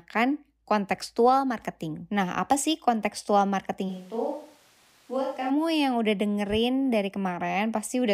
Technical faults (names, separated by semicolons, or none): switch to a distant microphone